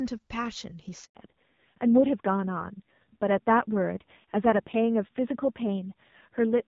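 At 1.05 s the speech cuts out for 100 ms, until 1.15 s. This is a handover gap. The call was passed from one network link to another, and no speech frames arrived while the switch happened. The sound fades within a few tens of milliseconds and then goes silent. Whatever was said in that tenth of a second is gone. The speech resumes when the new link carries audio again.

From 1.15 s to the end, the clip shows a fallback to narrowband. Before the gap, the AMR wideband (HD Voice) codec carries the speech cleanly, with only light coding damage. After it, nothing is left above 4 kHz. The speech sounds duller and muffled, and sibilants lose their edge. It also turns rougher. That texture fits an older narrowband codec running at a low rate, around 5.9 kbit/s.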